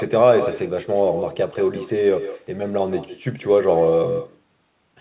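From start to finish, every phrase is trailed by a fainter, thinner copy arriving around 150 ms later and about 8 dB down, all within a band that stops at 4 kHz. This is echo with no canceller: the far end's loudspeaker leaks into its microphone, and nothing removes it.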